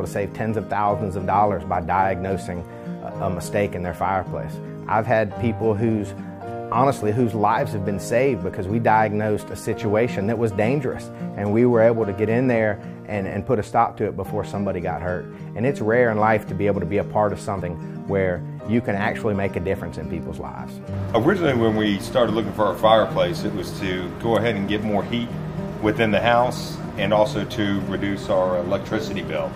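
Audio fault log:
17.60 s, damaged data in a compressed stream: a very brief disturbance, lasting only about 14 milliseconds, where the decoder met corrupted bytes in the compressed stream, misread or discarded the affected frame and had to resync on the next valid frame header. Whether it comes across as a chirp, squawk, click or tiny gap depends on what the decoder made of the bad data. Unlike a simple clock slip or cable dropout, it comes from garbled compressed frames rather than a break in the raw signal.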